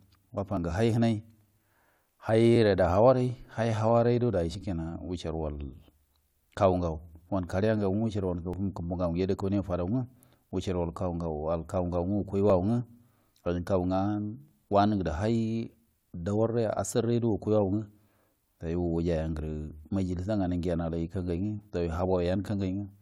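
At 0.57, 2.56, 4.55 (just after "awan dai"), 8.53, 10.51 (just after "kaniya fadon"), 12.50 and 14.48 s, the speech has brief skips: an overlap between stream segments. Adjacent 2-second segments claim overlapping time, so the player trims real audio at each join, and under 20 ms of speech vanishes. The waveform shows a sudden step discontinuity at each point, and the spectrogram shows a thin vertical broadband line repeating on a 2-second grid.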